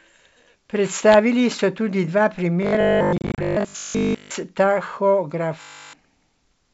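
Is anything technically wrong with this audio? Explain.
Yes, two kinds of trouble. From 2.63 to 4.37 s, right after "so tudi dva", the speech turns into a rigid metallic buzz at 50 Hz, and it's back from 5.61 to 5.93 s. That's robotic sound from repeated short buffers, likely from audio arriving too slowly so the player loops the last 20 ms. Most of the first stretch and all of the second is repeated material.

Inside the first stretch, from 3.18 to 3.41 s, there's packet loss on an ADPCM call. About 120 ms drops out in hard-edged silent gaps scattered over 200 ms, the longest about 30 ms. After each gap the decoder's predictor is out of step, so the speech comes back slightly distorted before settling. The G.722 wideband coding itself sounds clean.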